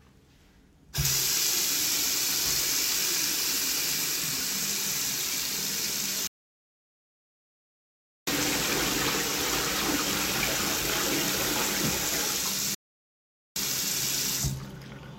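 Two playback stalls cut the sound to silence, from 6.27 to 8.27 s for 2 s and from 12.75 to 13.56 s for about 0.81 s, likely from the player's buffer running dry before output resumed.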